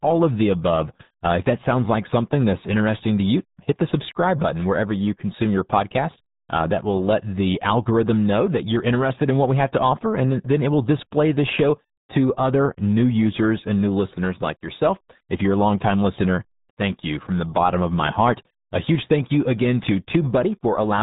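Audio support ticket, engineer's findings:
Muffled, gargly speech throughout, nothing above 3.8 kHz. RealAudio 14.4 codec: coarse low-rate speech coding, consistent with 8 kbit/s, discards upper band and smears detail.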